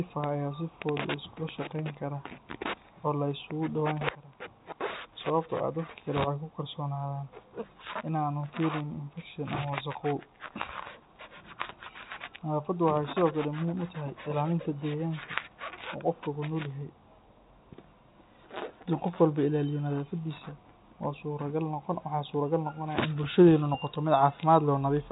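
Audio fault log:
Nothing stood out on listening through this telephone-band speech recording.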